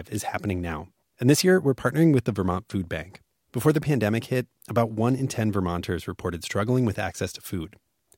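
No technical faults are audible.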